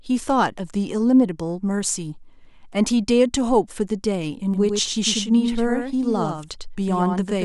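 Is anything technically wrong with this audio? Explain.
Yes, there's a doubled audio track from about 4.54 s right through to the end. A second copy of the speech, about 5 dB quieter, trails the original by roughly a tenth of a second, likely from a slower capture path or a misaligned edit. It kicks in abruptly and sounds like a dry, flat slapback with no room tail.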